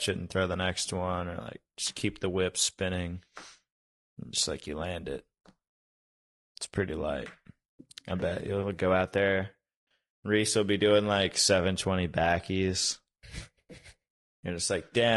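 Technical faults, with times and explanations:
Throughout, low-delay AAC compression. The speech sounds rough and grainy, and the damage is plainly audible. Noise fills the gaps between the harmonics of the voice. The likely cause is a low-delay codec such as AAC-ELD, at a rate that fits 32 kbps. It codes about 500 frequency lines a frame with a low-delay window, which is enough to separate the pitch harmonics. Bits run thin, and the coder spreads noise across the spectrum instead.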